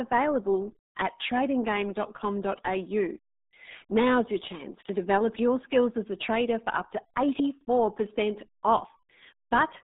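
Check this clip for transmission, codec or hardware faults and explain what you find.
A RealAudio 14.4 codec fault runs throughout the speech. The codec squeezes audio into very few bits, leaving a 200 Hz to 3.7 kHz band with nothing above 3.8 kHz, which fits an 8 kbit/s stream. Heavy coding damage makes the voice muffled and gargly.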